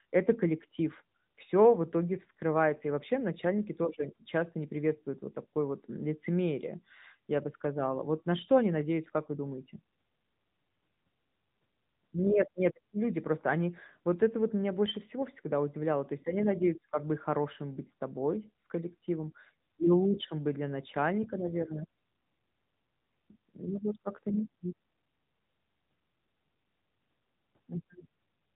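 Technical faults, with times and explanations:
Throughout, AMR narrowband mobile codec: the speech has passed through the AMR-NB phone codec, which resamples to 8 kHz and rebuilds each 20 ms frame from a vocal-tract filter driven by sparse pulses. Nothing survives above 3.8 kHz, so it sounds muffled and boxed, with a plainly audible buzzy, synthetic edge that fits a middle bitrate near 10 kbps. On a spectrogram, energy stops at a hard ceiling, and the waveform looks smoothed.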